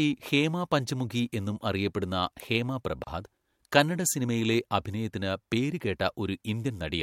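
At 3.04 s, right after "പഞ്ചമുഖി എന്നും അറിയപ്പെടുന്ന ഹേമ", the speech drops out for about 31 ms. This is a gap at a join of encoded pieces. Separately encoded chunks, spaced every 4.0 s, were butted together untrimmed. Encoder padding leaves brief silence with smeared edges before the speech resumes.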